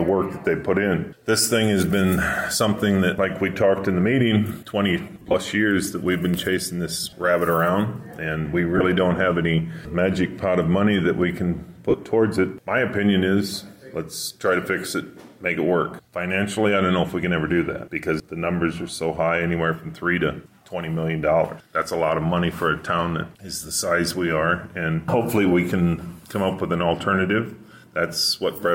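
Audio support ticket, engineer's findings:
Lost LE Audio frames: brief noisy smears at 5.14–5.34 s, 7.03–7.13 s, 8.77–8.81 s and 11.90–11.94 s. The first two are broken into short runs of around 30 ms. The LC3 decoder papers over the gaps by replaying the last spectrum with scrambled signs, and the dropout lengths fit 7.5 ms frames. The light codec softening underneath is ordinary.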